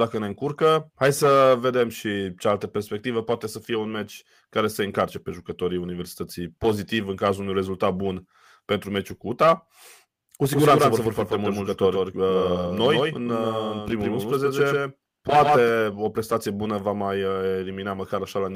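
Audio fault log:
10.53–15.69 s: doubled audio track, a dry copy of the speech trailing about 150 ms behind at roughly 5 dB lower, starting and stopping abruptly, likely a second, slower capture path.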